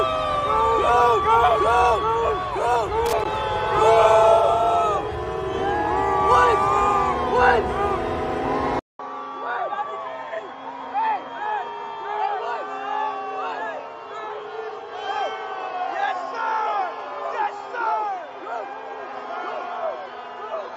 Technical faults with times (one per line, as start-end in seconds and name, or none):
3.06-3.25 loose connector crackle
8.79-20.76 input switched to a poorer device